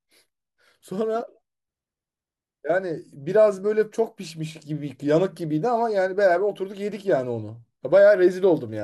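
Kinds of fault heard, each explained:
No technical faults can be heard anywhere in this speech.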